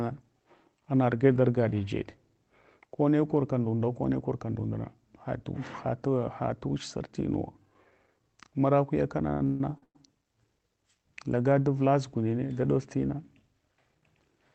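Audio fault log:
9.29–9.96 s, repeated stalls (stutter): the speech drags and hiccups five times, the longest hold lasting 147 ms. The jitter buffer kept running empty, so the receiver stretched the last sound, fading it during longer waits. About 393 ms is filled this way, with nothing lost.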